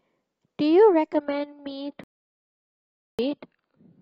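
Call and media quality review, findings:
Adaptive stream at a lower bitrate, 1.16 s to end. Sudden dulling with no gap, nothing above 5.1 kHz. Codec artefacts rise. Player stepped down to a much lower-bitrate rendition, which fits a very low AAC bitrate, as throughput fell.

Audio dropout to silence, 2.04 s to 3.19 s. Sound cuts to silence for 1.15 s, no room tone, then resumes mid-flow. Content in the gap is lost. Likely cause: input link or device lost while encoding continued writing silence.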